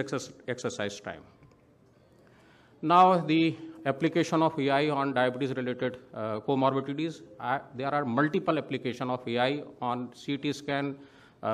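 Nothing here trips the ear at all; the sound just rolls along without a single hiccup worth flagging.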